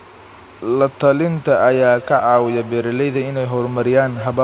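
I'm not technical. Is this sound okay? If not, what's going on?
No. From 1.61 s to the end at 4.44 s there is feedback echo between two devices: a second device in the room replays the call, the first microphone catches it again, and the sound returns about every fifth of a second, fading and getting thinner. Unlike ordinary room echo, the repeats arrive at a steady rhythm. The narrow, telephone-like tone comes from the call connection and is normal for it.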